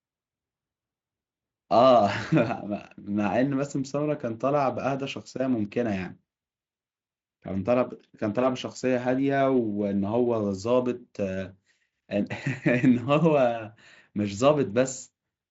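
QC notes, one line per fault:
Nothing to flag here; the Speex coding sounds like it's running at a generous setting, with the band topping out around 7.6 kHz as that codec's wideband mode does.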